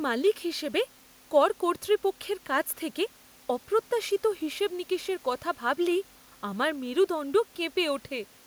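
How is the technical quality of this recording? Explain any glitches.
No audible glitches or faults.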